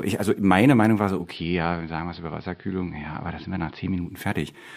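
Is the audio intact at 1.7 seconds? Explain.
No. At 1.7 seconds the speech is in the middle of a digital radio blend to analogue, running from 1.08 to 4.26 s. The receiver lost its digital stream and cross-faded over about 295 ms to the AM broadcast of the same station. The level drops by about 2 dB, and a faint hiss sits roughly 40 dB below the signal.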